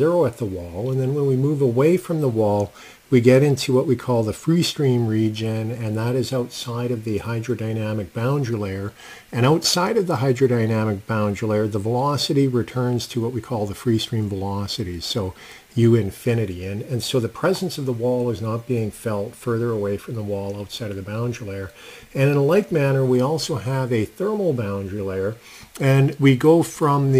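No technical faults can be heard anywhere in the recording. The audio runs without any break, glitch or added noise.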